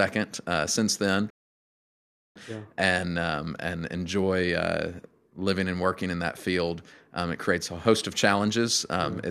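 At 1.30 s the speech halts in a rebuffering stall: playback ran dry and waited about 1.05 s for more data, resuming at 2.36 s exactly where it stopped. The waveform shows a flat gap, the spectrogram a blank vertical band, with nothing missing.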